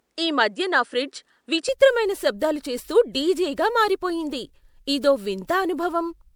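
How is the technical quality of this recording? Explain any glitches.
The recording has two faults: a smeared, hollow character throughout, and a duller stretch at the start.

Generation loss runs through the whole clip. The speech sounds swirly and hollow, and consonant attacks blur. The likely cause is repeated lossy coding: the audio appears to have passed through MP3 at 128 kbit/s around five times. Each pass quantised the signal again on a shifted frame grid. The noise and spectral holes piled up. Content stops at about 20.9 kHz.

From 0.00 to 1.69 s, the sound is narrower and duller. Nothing reaches above 10 kHz. The likely cause is the input sitting on a poorer device, such as a second microphone or a headset's call profile. It then switches back. There is no gap at the switch and no clear level jump. A faint new noise floor sits well below the speech. The full band returns with "శబ్దాలు చేస్తూ డీజేగా మారిపోయింది".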